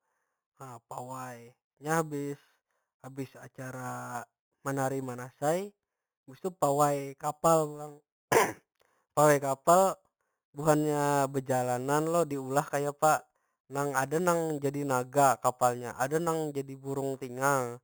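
From start to finish, the speech carries imaging from sample-and-hold upsampling: each sample was simply repeated to raise the rate, with no smoothing filter, which fits audio brought up from 8 kHz. Mirror copies of the spectrum sit above the band, the lowest spanning 4 to 8 kHz at about 16 dB below the signal, heard as a metallic fizz. Unlike steady hiss, it rises and falls with the speech, and unlike distortion, its lowest copy moves opposite to the pitch.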